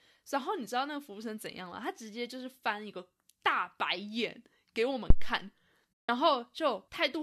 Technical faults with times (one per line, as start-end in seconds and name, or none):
5.10-5.37 phantom power thump
6.03-6.09 AAC frame loss with muting